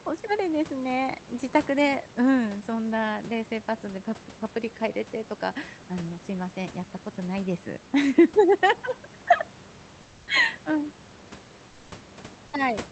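At 10.01 to 10.27 s and again at 11.69 to 11.91 s, comfort noise takes the place of the background, likely because Opus discontinuous transmission stopped sending audio during the pauses. The real room noise, about 28 dB below the loud parts, gives way to a steady, featureless hiss about 4 dB quieter in the first gap and about 2 dB quieter in the second, then the real background returns when the sound resumes.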